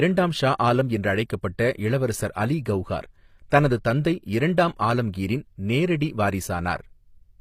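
From start to finish the speech carries HE-AAC compression artefacts, plainly audible. The treble sounds synthetic: s sounds come out gritty and lispy with a metallic sheen, which fits a low bitrate around 24 kbps, likely with spectral band replication patching copied lower bands upward. On a spectrogram the upper band looks blocky and smeared, with harmonics that fail to continue across the crossover, and nothing above 15.5 kHz.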